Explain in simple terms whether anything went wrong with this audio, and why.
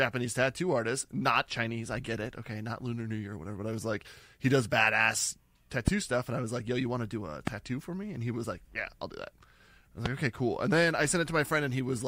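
Three loud pops cut into the speech. The first comes at 5.88 to 5.90 seconds, right after "like he does badass". The second is at 7.47 to 7.50 seconds, after "want to do a". The third is at 10.06 to 10.08 seconds, just before "like okay cool". Each is a single sharp click, far louder than the talking, and the speech carries on underneath. A sudden electrical jolt, likely from a plug, switch or static, caused them.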